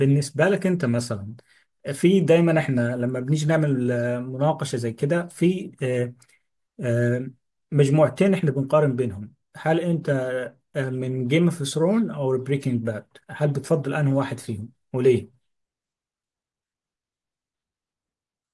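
Listening closely to the speech here turns up nothing that stands out as a technical fault.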